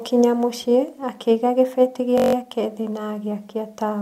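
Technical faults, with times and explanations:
2.18 to 2.35 s, system hang loop: for a moment the speech freezes into a rough, steady buzz. The same 21.33 ms slice of audio plays back-to-back eight times, so you hear it repeating at about 46.9 Hz instead of as a stutter. That's the playback side briefly stalling while the audio hardware keeps replaying its ring buffer, and the loop length fits a 1024-sample buffer. Once it recovers, the speech carries on with essentially nothing missing.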